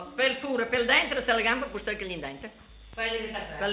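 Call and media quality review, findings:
No faults found; the call path carries nothing above 4 kHz, which fits G.711 mu-law at 64 kbps.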